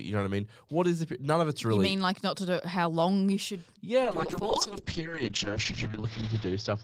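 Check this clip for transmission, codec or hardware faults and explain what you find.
One fault, a call bitrate drop. From 4.05 s, just after "how long you should", to the end of the clip, the sound turns rough and watery and loses its top end, with the band now stopping near 8 kHz instead of reaching about 20 kHz. The call's bandwidth estimate fell, so the Opus encoder was given far fewer bits and coded coarsely. The roughness points to a rate falling from around 32 kbps to about 6 kbps, held at its lowest for roughly 1.7 s.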